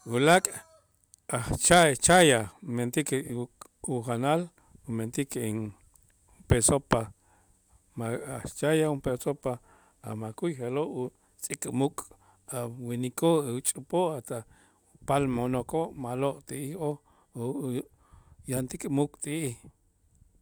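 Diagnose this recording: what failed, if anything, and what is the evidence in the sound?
At 3.25 to 3.30 s the speech gives a brief garbled flutter. These are frames out of order at the network or codec stage: two adjacent frames of about 21.3 ms, which fits single codec frames, were exchanged, so their halves played swapped with no time lost.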